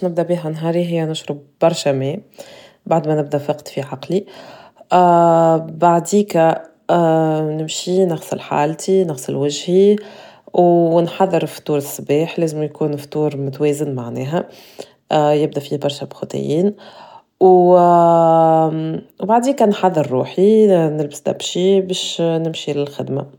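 Nothing stood out on listening to the speech in this recording.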